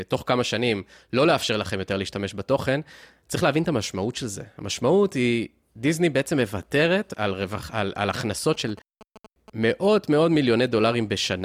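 From 8.54 to 9.64 s, GSM signalling bursts break into the speech: a galloping dit-dit-dit of short buzzes at a 217 Hz repetition rate, sitting roughly 20 dB below the voice. A nearby 2G phone sending brief groups of radio bursts gets rectified by the audio circuitry. Unlike mains hum, it is rhythmic and intermittent rather than a steady tone, and unlike an active call it comes in clusters instead of a continuous buzz.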